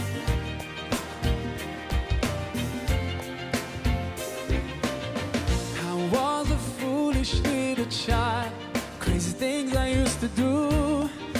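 Nothing technically wrong turns up anywhere in this audio, so there's nothing to flag here.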